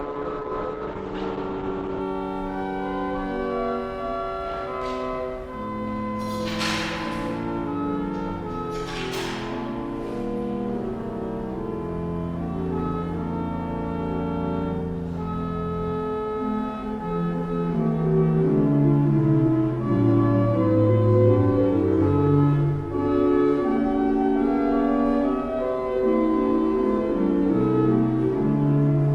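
An adaptive stream starting at a low bitrate affects 0 to 2.0 s: the player opened on a lean version, which points to roughly 12 kbit/s Opus, so nothing above 8.6 kHz survives and codec artefacts are stronger, until it measured the connection and stepped up abruptly, without a gap.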